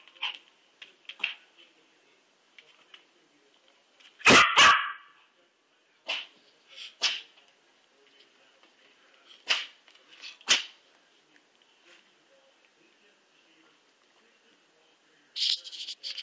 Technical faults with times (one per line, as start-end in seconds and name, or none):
none